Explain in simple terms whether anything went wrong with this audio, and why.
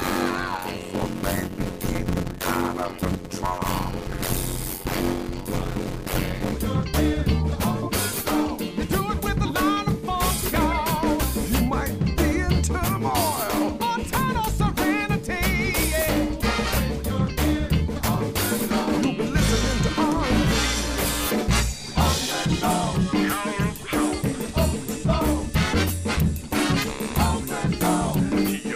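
Yes, something went wrong during the first 6.5 seconds or so. There's a block size mismatch (padded): one stage handed over shorter chunks, which fits 256-sample blocks, than the next expected, and the gaps got filled with silence. That puts a buzz of about 92 Hz over the sound and slows it to roughly half speed, while the timbre stays the same.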